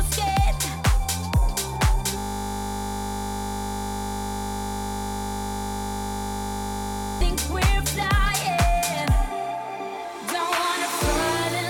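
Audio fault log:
2.18–7.21 s, system hang loop: a steady buzz at 50 Hz replaces the audio for about five seconds. The system froze while the sound hardware kept replaying a 20 ms stretch of its ring buffer, roughly 250 times, and the repeats fuse into a tone.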